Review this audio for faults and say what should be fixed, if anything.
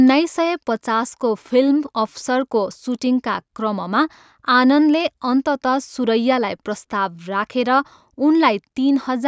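No faults; nothing needs fixing.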